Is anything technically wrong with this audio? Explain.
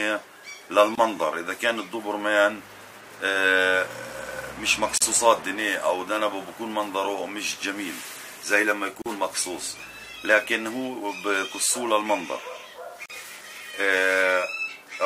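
Yes, there's a recurring gap at a join of encoded pieces. The sound drops out briefly at 0.95, 4.98, 9.02 and 13.06 s, once every 4 s. The first gap runs about 25 ms and the others about 40 ms. It looks like 4-second chunks were encoded separately and butted together untrimmed, so each join keeps the encoder's start-up delay and last-frame padding. You hear a short hole with smeared edges, then the sound resumes exactly where it left off.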